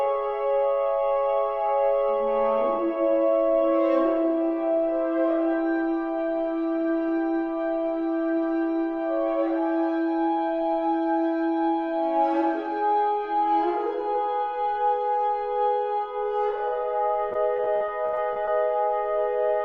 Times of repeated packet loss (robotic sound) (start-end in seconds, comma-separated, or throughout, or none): 17.29-18.49